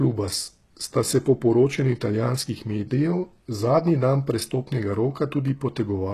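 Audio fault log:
throughout, HE-AAC compression: sibilants in this speech turn gritty and metallic, and the treble sounds synthetic rather than natural. This is likely spectral band replication, with upper bands copied from lower ones and loosely shaped, which fits a low bitrate near 16 kbps. On a spectrogram, the upper region looks like a smeared, blocky copy of the lower bands, and nothing appears above 12.3 kHz.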